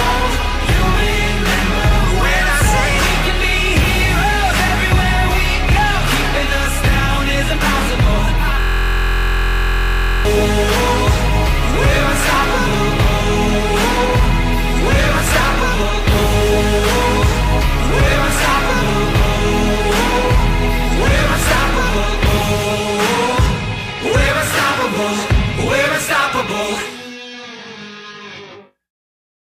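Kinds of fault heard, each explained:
System hang loop: from 8.60 to 10.25 s the sound collapses into a steady buzz, one fragment about 23 ms long repeating over and over at roughly 43 Hz, some seventy times. That points to the computer or its driver freezing while the sound hardware kept replaying the same stretch of its ring buffer. A loop this short fuses into a tone rather than a stutter, and its length fits a 1024-sample buffer.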